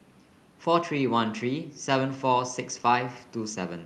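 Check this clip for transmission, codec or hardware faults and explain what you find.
I find no transmission, codec or hardware faults in this clip.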